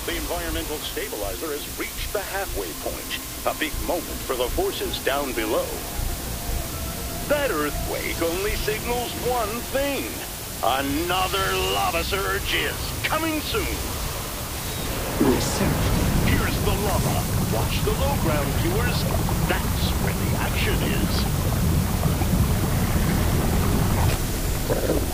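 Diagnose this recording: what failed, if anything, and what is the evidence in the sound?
Sample-format conversion failed: the audio was requantised to low bit depth with dither, 5 bits. Throughout, an even, constant hiss sits roughly 10 dB below the signal, with no distortion, because dither turns the coarse rounding error into steady white noise.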